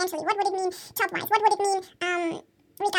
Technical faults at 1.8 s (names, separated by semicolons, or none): wrong sample rate